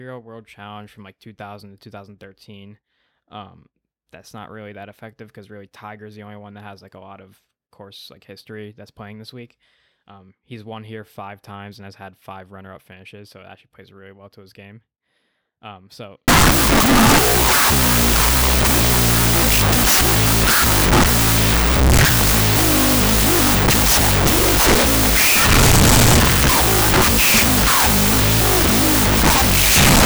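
Wrong sample width hits this speech clip from 16.28 s to the end, just before "of the course that": 16-bit samples read as unsigned 8-bit leave loud noise burying half-speed, lowered audio.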